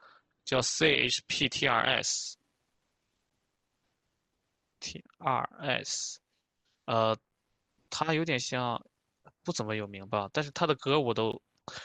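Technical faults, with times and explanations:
0.0 to 2.0 s, adaptive stream starting at a low bitrate: The opening speech is dull. Nothing above 8.4 kHz, and codec artefacts are stronger. Then at 2.0 s the detail returns abruptly with no break. The sound fits a player that began on a cheap Opus stream near 16 kbit/s to start quickly, then switched to one near 64 kbit/s once it had gauged the connection. On a spectrogram the top band is empty until 2.0 s, then fills in along a sharp vertical edge.
3.30 s and 11.32 s, gap between chunks: Each is a 12 ms hole of silence with hard edges, heard as a short hole or dip in the speech. Nothing is missing from the content. The playback simply pauses at a join between pieces of audio, which fits a stream delivered in 4-second chunks where the player starts a chunk late or codec padding adds silence. The waveform drops to silence for 12 ms with abrupt edges, and the spectrogram shows a thin blank vertical stripe at each time.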